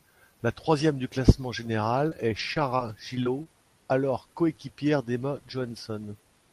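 Between 2.09 and 3.47 s, after "troisième du classement", there are scattered short gaps: about five tiny packet losses, each patched by extending the previous sound, leaving brief ticks and smears before "alors coéquipière".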